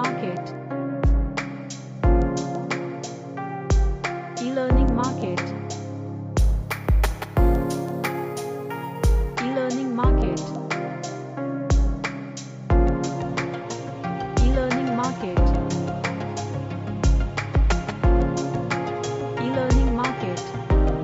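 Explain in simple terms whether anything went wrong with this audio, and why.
From 6.39 to 9.36 s, imaging from sample-and-hold upsampling adds a bright metallic fizz. Samples were repeated without smoothing, which fits a 16 kHz original.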